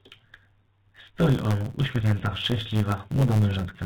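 It's a speech clip with a block size mismatch (truncated) running the whole way through: the tail of every block gets dropped, which puts a 109 Hz buzz over the sound and runs it about 1.09 times fast at roughly normal pitch. At 1.45 s there's a skip ahead: around seven tenths of a second just vanishes and the two sides butt straight together. Then from 1.54 s to 3.57 s a jitter buffer speed-up trims short pitch-period chunks to shed about 0.3 s of backlog, so the speech sounds hurried, about 13% faster at the same pitch, all over a phone-band path with nothing above 4 kHz.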